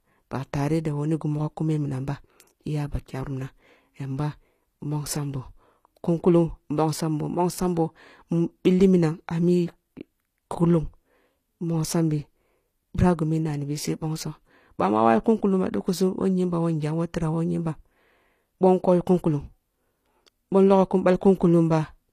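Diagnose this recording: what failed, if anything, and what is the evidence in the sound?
The damage sits at the codec stage and runs through the whole speech clip, with plainly audible artefacts from start to finish. The content stops at about 14.9 kHz, yet the s sounds below that edge turn gritty and lispy instead of dull. That points to HE-AAC compression as the likely cause, at a rate that fits roughly 24 kbps. Spectral band replication copies lower bands upward to rebuild the top end, so the treble is synthetic. A plain low-pass filter or band-limited MP3 would leave the top dull rather than bright.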